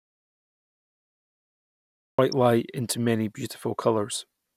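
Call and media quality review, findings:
Audio dropout to silence, 0.00 to 2.19 s, already under way when the clip starts. Silence with no room tone: the waveform is a dead-flat line and the spectrogram is fully blank until speech cuts in abruptly at "light into many". Likely cause: input loss (device, link or mute) while the encoder kept writing silence. The speech in the gap is unrecoverable.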